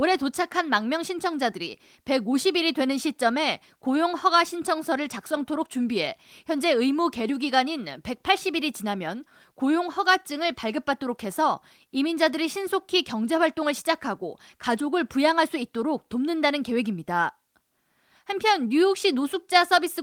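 No technical faults can be heard in this speech clip. The Opus voice compression runs at 24 kbps in hybrid mode and keeps the full audio band, leaving only light coding damage in the sound.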